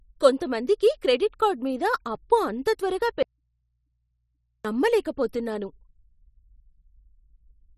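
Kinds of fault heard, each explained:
Audio dropout to a faint residue: from 3.23 s to 4.65 s the speech cuts out abruptly for about 1.4 s, leaving only mains hum far below the signal, roughly 50 dB down, likely from an open input after a break. Unlike a natural pause or fade, the signal vanishes suddenly while the path stays live.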